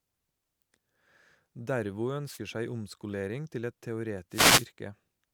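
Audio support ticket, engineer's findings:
Wireless microphone noise hit, speech clip. Hit 1: 2.26–2.39 s, short static swish just before "seg omskolering til et". Hit 2: 4.30–4.67 s, longer burst right after "seg omskolering til et". Component: analogue FM radio link, receiver side. Mechanism: reflections cancel the carrier, receiver noise rises through the fade. Spectrogram shows broadband vertical haze, 0.13 s and 0.37 s wide. Waveform shows a fuzzy noise envelope.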